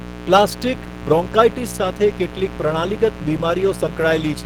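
From start to finish a mains buzz sits fairly high under the speech: 60 Hz switching spikes with harmonics that a spectrogram shows as evenly spaced horizontal lines climbing into several kHz. Also throughout, the speech sounds hoarse, rough and grainy, with noise-filled bands reaching about 20 kHz on the spectrogram, likely Opus compression in hybrid mode at a rate around 16 kbps.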